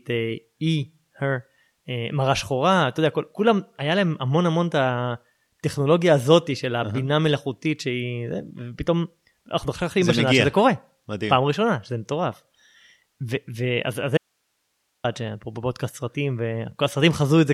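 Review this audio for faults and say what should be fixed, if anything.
At 14.17 s the speech drops out for about 0.87 s, to 15.04 s, leaving only faint hiss roughly 50 dB below the signal: an audio dropout to a faint residue, likely a momentary signal loss upstream while the input stayed live. Securing connectors and monitoring the feed would prevent it.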